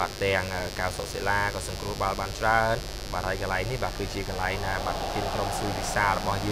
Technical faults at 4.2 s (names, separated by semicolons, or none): mains buzz